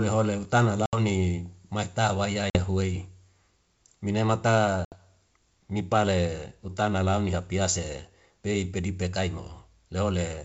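Hard-edged holes of silence cut into the speech at 0.86 to 0.98 s, 2.50 to 2.59 s and 4.85 to 4.97 s, each followed by a brief, slightly distorted onset. This is packet loss on an ADPCM call: bursts of roughly 70, 50 and 70 ms went missing and were filled with silence. The decoder's adaptive predictor and step size drifted from the sender's, so the speech needs some tens of milliseconds to settle after each gap.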